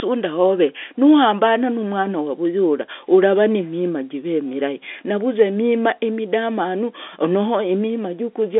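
No technical faults are audible.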